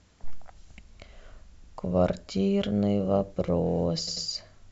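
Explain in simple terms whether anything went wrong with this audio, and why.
Yes, something went wrong: there are repeated frames. At 1.63 s, a 139 ms slice of the speech plays again, giving a short stutter. At 4.07 s, a 93 ms slice repeats twice more, making the clip 186 ms longer there. Stored chunks of audio were played more than once, which is why the clip grows longer. An echo would blend in as a fainter copy, but here the sound jumps back to replay the same bit exactly.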